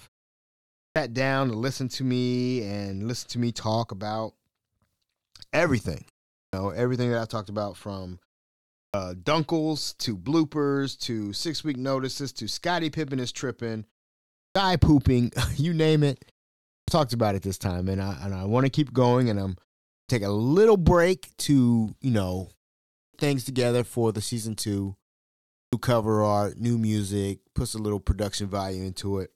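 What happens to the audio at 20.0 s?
Right after "keep going and I'm" there's a clipped start after a pause: the output wakes late from the 0.39 s gap, swallowing about 139 ms (19.95–20.09 s), so the next word snaps in abruptly.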